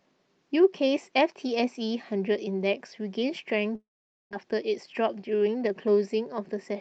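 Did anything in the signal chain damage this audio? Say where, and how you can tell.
Yes. From 3.75 to 4.35 s the speech turns into a fading buzz and then sits silent for about 470 ms before resuming with roughly 400 ms of audio simply gone. This is likely a long network dropout: the receiver's concealment stretched the last sound, then gave up.

From 4.43 to 5.87 s the speech runs about 10% fast at unchanged pitch, sounding hurried. This is a jitter buffer speed-up: after the dropout's backlog of roughly 150 ms, the receiver trimmed short pitch-period slices repeatedly to catch up. Underneath both, the band-limiting near 8 kHz fits a normal Opus call path at around 40 kbps.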